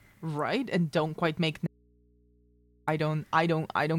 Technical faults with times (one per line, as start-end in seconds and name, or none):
1.67-2.87 audio dropout to a faint residue